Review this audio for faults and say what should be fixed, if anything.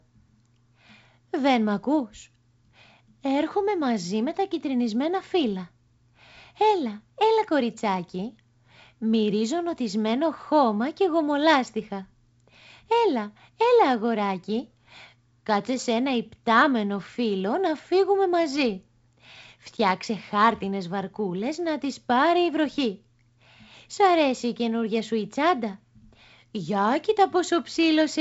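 No faults heard; nothing here needs fixing.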